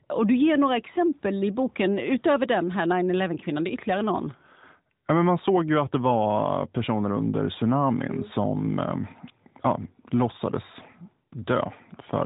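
Nothing stood out as a fault on listening; the audio comes through a narrowband mobile codec path, with nothing above about 3.8 kHz.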